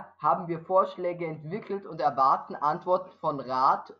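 From the start to 1.91 s the speech has channel delay (comb filtering): one channel lags by roughly a tenth of a millisecond, a few samples, before the mono sum, so a notch cuts in near 5 kHz. It sounds hollow and phasey. A spectrogram shows a dark horizontal band there, while the waveform looks nearly unchanged.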